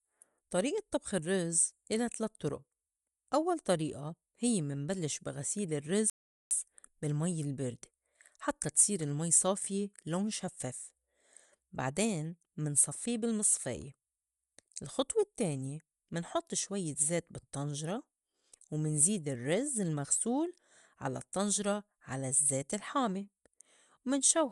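Across the whole speech clip runs Bluetooth LC3 compression, likely from an LE Audio link at around 48 kbps with 10 ms frames, which fits what is heard. The codec discards much of the upper spectrum and patches it with synthetic noise, so the voice takes on a grainy, breathy edge that is plainly audible. On a spectrogram the upper spectrum thins out and is filled with noise-like texture.

From 6.10 to 6.51 s comes a playback stall, a silence of about 0.41 s. Most likely the player ran short of data or its thread was held up, leaving the output with nothing to play until it recovered. The speech halts abruptly mid-flow, then resumes. A waveform shows the signal dropping to a flat line for that span, and a spectrogram shows a clean vertical gap across all frequencies.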